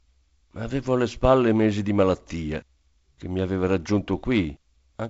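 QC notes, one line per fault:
No faults heard in this wideband telephone speech.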